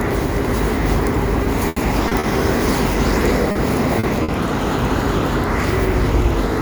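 Everyday sound, with three kinds of network fault. From 1.43 to 2.26 s, repeated packet loss left four gaps, the longest 80 ms, each patched by continuing the last sound, so about a fifth of that stretch is filled and it turns choppy with pieces missing. At 3.51 to 3.58 s and again at 3.99 to 4.06 s, short concealed packet loss dropped 40 ms each time, smoothed over by extrapolation, leaving brief smears where a little sound is missing. At 4.23 to 4.31 s, a short stall from a late packet emptied the jitter buffer, so the last sound is held about 50 ms too long before continuing with nothing lost.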